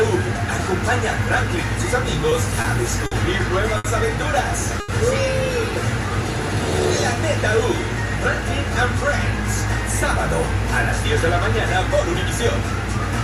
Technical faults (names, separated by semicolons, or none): short stall from a late packet